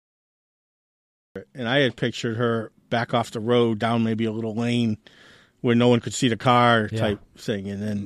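For the first 1.36 s there is only silence, then the speech bursts in abruptly mid-sound with no natural attack or fade-in. This is a cut-off start: the recording or stream began late, catching the speech already underway at 1.36 s.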